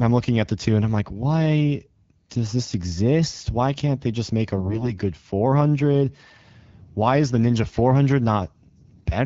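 From 4.56 to 4.93 s there is a burst of AMR bit errors. The speech keeps roughly its pitch and loudness, but it turns hoarse, scratchy and gargly for that stretch. The link corrupted the weakly protected bits in a run of frames, at an error rate of around 7 percent. The frame checksum still passed. So the decoder misplaced its excitation pulses and used wrong fine pitch, gain and spectral values. The surrounding wideband coding stays clear and only lightly coloured.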